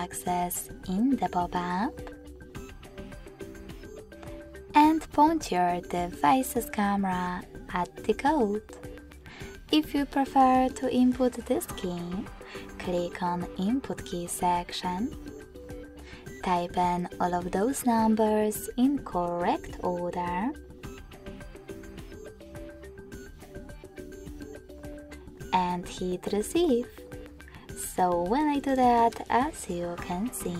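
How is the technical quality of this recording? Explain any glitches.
No glitches or technical faults are audible anywhere in the recording.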